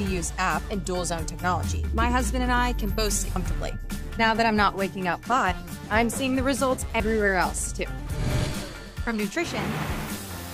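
The audio was likely hit by dropped buffers (overruns), where samples were overwritten before being read, so short stretches vanish and the edges butt together. At 1.88 s, 3.36 s and 7.0 s the sound jumps abruptly, skipping roughly 70, 70 and 40 ms.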